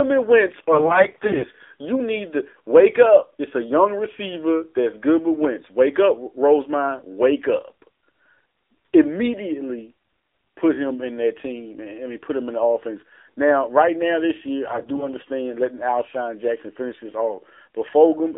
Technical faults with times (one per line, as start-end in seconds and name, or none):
0.00-18.37 AMR narrowband mobile codec
0.72-1.45 AMR bit errors
14.66-15.09 AMR bit errors